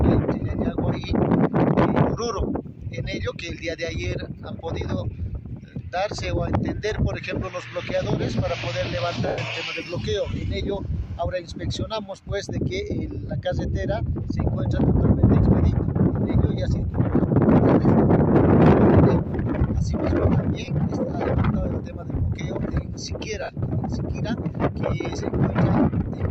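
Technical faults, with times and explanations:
0.40 s, 9.28–9.38 s, 13.27 s, 16.79–16.87 s, 20.65–20.68 s and 23.41–23.57 s, lost LE Audio frames: Bluetooth LE Audio frames went missing, and the LC3 decoder filled each gap by reusing the last spectrum with random signs, fading it after a few frames. The shortest gaps, 20 to 30 ms, sound like a brief noisy smear. The 100 ms loss at 9.28 s decays audibly toward silence. At 16.79 s and 23.41 s the losses come as scattered bursts rather than one gap, with the longest run at 23.41 s about 70 ms. The gap lengths fit 10 ms frames.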